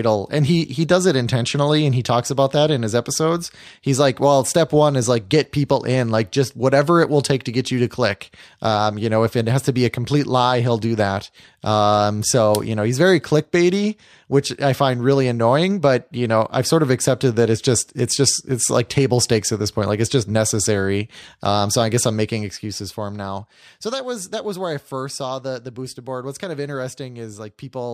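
No technical faults are audible.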